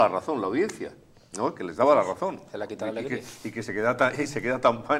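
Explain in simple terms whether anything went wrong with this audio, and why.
Nothing went wrong here; the audio holds steady throughout with no dropouts, glitches or distortion to point to.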